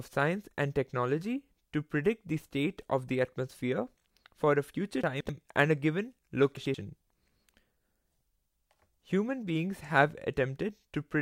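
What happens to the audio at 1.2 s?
Nothing goes wrong at 1.2 s; the speech there is intact, with no dropout, click, distortion or other fault.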